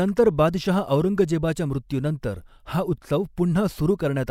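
No technical faults are audible.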